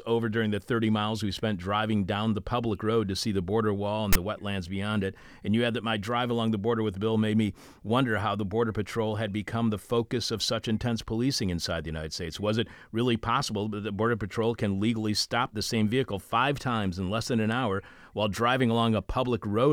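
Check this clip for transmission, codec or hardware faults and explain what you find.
One fault appears in this speech clip: file tags played as audio, from 4.13 to 4.15 s. A block of text metadata was decoded as sample data, producing a brief, loud rasp pushed to one side with abrupt edges. Unlike a plain click or dropout, it carries a buzzy, lopsided texture rather than a single spike or silence.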